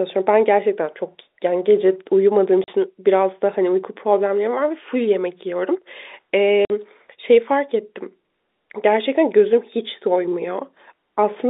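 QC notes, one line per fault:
2.64 s and 6.65 s: packet loss filled with silence. The speech drops to dead silence for 40 ms, then 50 ms, both multiples of 10 ms, which fits lost 10 ms packets. The holes have hard edges, unlike concealment, which would smear or repeat sound.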